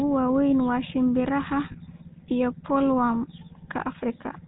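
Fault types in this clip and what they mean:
GSM full-rate codec: The whole clip has that buzzy, gravelly edge you get from the original GSM speech coder, which fits the 13 kbps full-rate mode. It models the vocal tract and drives it with a coarse, regularly spaced pulse excitation, so the fine texture of the speech is rebuilt rather than kept. Nothing comes through above 4 kHz, so it sounds narrow and dull up top, and the roughness is plainly audible here.
lost GSM frames: Right after "waaweyn waa shimbiraha", around 1.72 to 1.77 s, there's a short metallic ring where the sound briefly freezes in place. That's the decoder covering for missing data by repeating the parameters of the last good frame instead of leaving a gap. The hole is about 40 ms, which fits two lost frames, so it never gets long enough to fade to silence.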